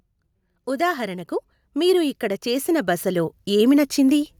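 From 0.65 s to 4.25 s the speech shows automatic gain rising: the level control judged the input too quiet and kept raising its gain, by about 13 dB across those 3.6 seconds. The speech and the background noise swell together, steadily and slowly. That shared, gradual climb separates it from compressor pumping, where the background surges up in the gaps between syllables and drops back within a fraction of a second.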